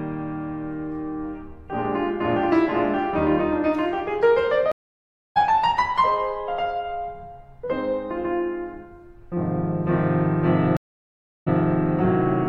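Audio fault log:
4.72–5.37 s and 10.77–11.58 s, stream reconnect. The connection dropped twice and the music went silent, for 0.64 s and then 0.70 s. Each time a fresh decoder restarted mid-stream. The first return skips roughly half a second ahead. The second jumps back 0.12 s and repeats material.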